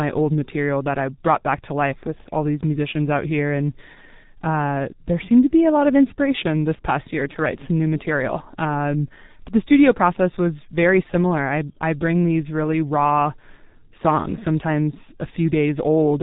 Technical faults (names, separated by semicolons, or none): G.723.1 codec